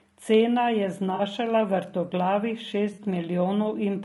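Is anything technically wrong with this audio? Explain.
Yes. Throughout, the speech is rough and grainy with noise between harmonics, likely from low-delay AAC compression at about 32 kbps, whose short frames resolve pitch poorly. AAC frame loss with concealment occurs at 1.15–1.21 s and 2.93–2.99 s: roughly 40 ms gaps, consistent with two lost frames, are filled from the previous spectrum, leaving brief smeared, noisy patches.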